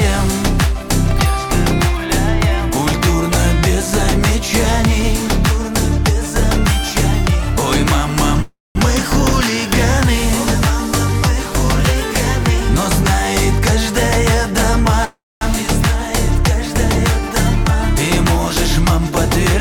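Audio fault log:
8.42–8.78 s and 15.05–15.44 s, call audio freeze: packets were likely held up in transit, draining the jitter buffer, so the receiver stretched the last sound into a fading buzz or hiss before dropping to silence for about 200 ms and 230 ms. When delivery resumed, the audio picked up exactly where it stopped, so nothing is lost. Instead, gaps of 332 ms and 365 ms are inserted, pushing everything after each one later by that amount.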